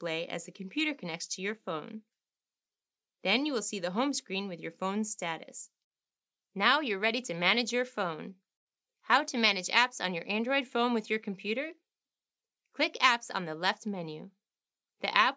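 No technical faults can be heard anywhere in it.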